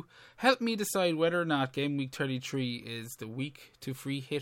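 No technical faults can be heard anywhere in the recording; the speech signal arrives intact, with nothing in its level, continuity or timing that points to a problem in the chain that captured or carried it.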